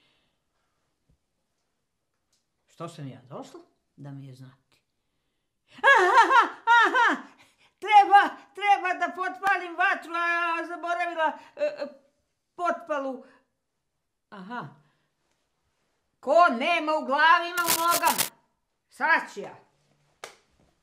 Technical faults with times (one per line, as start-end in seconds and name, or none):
9.47 block of digital silence
17.57-18.29 cable scratch noise